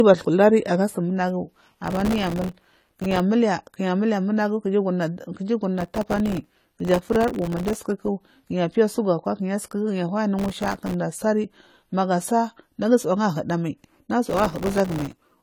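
Throughout the speech the sound is dull and smeared, with a warbling fizz on sibilants and nothing above 14 kHz. This is plainly audible AAC compression damage, likely from AAC-LC at a low rate that fits about 32 kbps. At that rate the encoder cannot spend enough bits on every frequency line, so it drops the top of the spectrum and coarsely quantises what remains, leaving the texture swimmy.

From 1.86 to 3.20 s, 5.78 to 7.78 s, 10.39 to 10.94 s (just before "asari magu asari nagu") and 14.30 to 15.32 s, a gritty, tearing crackle rides over the speech. This is processor overload crackle. The processor keeps missing the deadline for very short buffers of around a millisecond and a half, and each miss leaves a hard-edged gap of silence. Over a hundred such gaps in the longer bursts, and fewer in the shortest one, merge into continuous crackle that stops when the load clears.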